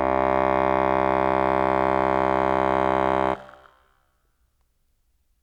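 Nothing in the music stood out as a technical problem on listening.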